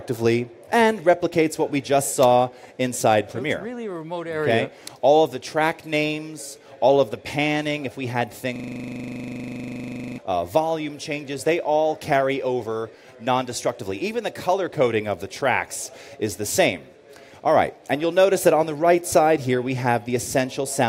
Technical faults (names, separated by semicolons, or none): system hang loop